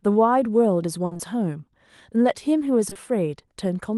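A speech recording carried over a WebRTC call path. The Opus coding noise and the high-frequency cut-off near 12 kHz are consistent with about 32 kbps. A burst of packet loss at 1.05 to 1.13 s replaces 60 ms with a continued, fading copy of the preceding sound. On a spectrogram this shows as a smeared, decaying continuation of the last sound before the speech resumes further on. Short concealed packet losses follow at 1.13 to 1.21 s and again at 2.89 to 2.97 s, in 20 ms steps. They sound like a brief wobble or smear and appear as blurred, slightly discontinuous bands in the spectrogram.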